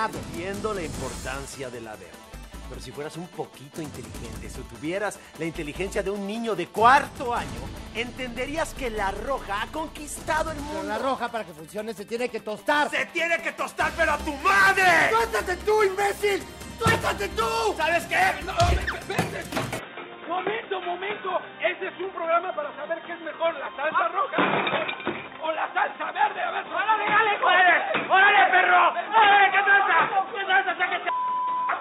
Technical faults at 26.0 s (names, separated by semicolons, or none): input switched to a poorer device